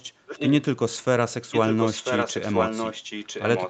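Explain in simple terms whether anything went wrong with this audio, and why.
Echo leak, from 0.26 to 0.52 s and again from 1.51 s to the end: a second copy of the speech arrives about one second late, only a little quieter. The likely cause is a loudspeaker on the far end whose echo canceller missed part of the sound, sending it back.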